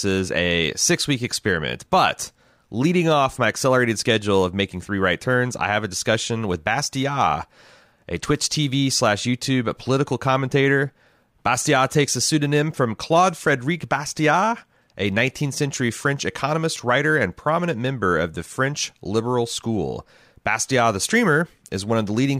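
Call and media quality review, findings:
No faults found in the speech recording; no symptoms to attribute to any component.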